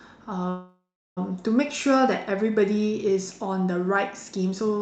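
Speech that stalls at 0.49 s, where the last sound hangs on as a fading buzz or hiss and then drops to silence for about a third of a second before the talker resumes at 1.19 s with nothing lost, only pushed later by roughly 0.67 s. That is a call audio freeze, likely from packets delayed in transit until the jitter buffer ran dry. The call codec's band limit near 8 kHz, consistent with Opus at around 32 kbps, applies throughout.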